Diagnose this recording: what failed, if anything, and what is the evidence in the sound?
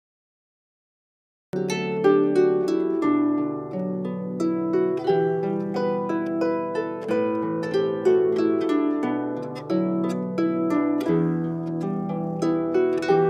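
The capture began late, leaving a cut-off start at the recording or stream-start stage rather than in the signal path. The first 1.53 s are digital silence, and at 1.53 s the sound arrives already in progress, with no attack or fade-in. This differs from a mid-stream dropout because the gap occurs only at the very beginning.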